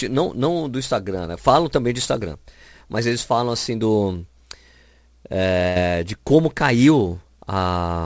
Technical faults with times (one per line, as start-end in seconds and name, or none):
5.68-5.78 burst of packet loss